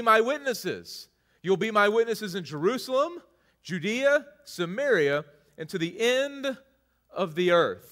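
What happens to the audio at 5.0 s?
Nothing goes wrong at 5.0 s: the speech there plays through intact, with no dropout, click, distortion or other fault.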